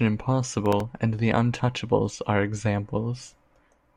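From 0.66 to 0.84 s, processor overload crackle tears through the speech. The processor misses a handful of deadlines on tiny buffers, a millisecond or two each. Each miss replays a hard-edged scrap of old audio. The result is brief gritty crackling.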